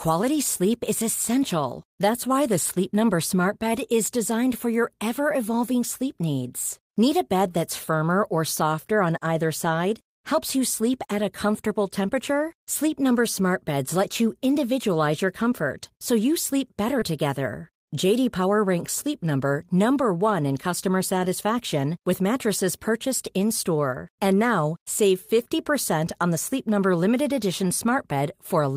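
A speech recording in which, just after "so you sleep better", about 20 ms of the call arrived too late for the decoder at 16.99 to 17.03 s, a short concealed packet loss that the receiver patched by extending the preceding sound, leaving a brief smear or wobble. Overlapping it, one 20 ms packet at 17.01 to 17.03 s was a lost packet rebuilt from error correction, recovered from a low-bitrate copy carried in the following packet, so that moment sounds rougher and noisier rather than silent.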